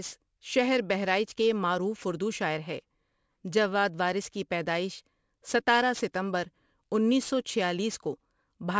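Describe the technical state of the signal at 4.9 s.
At 4.9 s the speech carries aliasing, present across the whole clip rather than at that moment alone. The audio was downsampled without an adequate anti-alias filter, in a way that fits a drop from 48 kHz to 16 kHz. Content above the 8 kHz fold point has reflected back into the band as spurious, unrelated tones, roughly 20 dB below the signal. Sibilants sound gritty and metallic, and the spectrum runs hard up to the 8 kHz edge.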